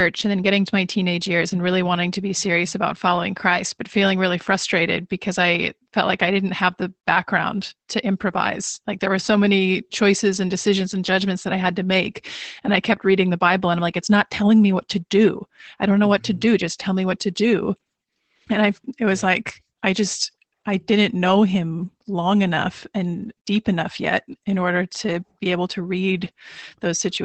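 Opus voice compression runs through the whole of this speech recording, from start to finish. Nothing is present above about 8.7 kHz, the ceiling of Opus's wideband mode. The SILK linear-prediction coder models the voice as a filter driven by a coarsely coded excitation, and at a bitrate that sounds like roughly 12 kbps that coarseness is plainly audible: the speech comes out muffled, slightly hoarse and faintly robotic.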